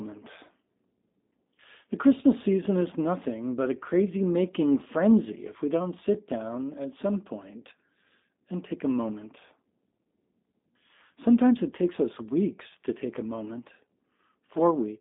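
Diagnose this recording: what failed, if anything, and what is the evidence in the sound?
The failure is at the codec stage: the speech has passed through G.729 (the G.729A variant) for the whole clip. Nothing survives above 3.7 kHz or below about 200 Hz, and the coding damage is plainly audible as a rough, slightly synthetic texture. That fits an 8 kbit/s codec that discards the waveform and resynthesises speech from a vocal-tract filter, a pitch predictor and a few pulses per 10 ms frame.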